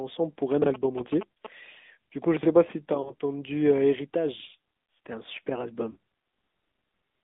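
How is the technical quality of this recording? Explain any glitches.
The technical quality is poor. The whole recording has passed through a mobile phone codec, and there are four short glitches on top of that.

AMR narrowband mobile codec. This runs throughout. The audio is confined to roughly 200 Hz to 3.6 kHz, so it sounds thin and boxy. The codec rebuilds speech from a vocal tract model driven by a few pulses per frame. The damage is plainly audible as a buzzy, synthetic edge, which fits AMR-NB's 10.2 kbps mode.

Chunks out of order. There are two events, from 0.62 to 0.66 s and from 2.37 to 2.45 s. The audio moves in blocks of about 21 ms. A block arrived late and played after material that should follow it. At 0.62 s it is one block out of place. At 2.37 s it is three blocks late, so that jumble is longer. Nothing is lost, but the sound briefly scrambles at the hard joins.

Lost AMR speech frames. 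These occur from 3.02 to 3.15 s and from 5.92 to 5.97 s. Radio errors corrupted frames, so the decoder reused its last good pitch and vocal tract settings at falling gain. The first sounds like one missing 20 ms frame, heard as a quick dip or warble. The second points to two frames, about 40 ms. It is drawn out and fades before recovering weak or rough.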